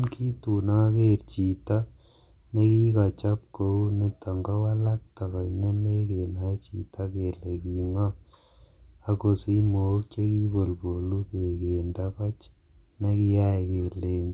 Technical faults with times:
none

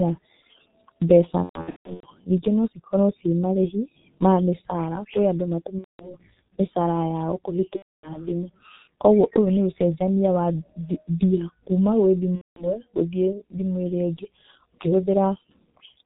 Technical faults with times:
0.00-16.05 G.723.1 codec
1.43-2.09 VoIP packet loss concealed by the speech codec
5.78-6.17 VoIP packet loss concealed by the speech codec
7.76-8.18 VoIP packet loss concealed by the speech codec
12.35-12.77 VoIP packet loss concealed by the speech codec

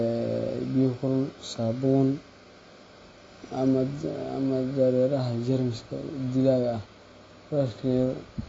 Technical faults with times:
0.00-8.49 AAC compression

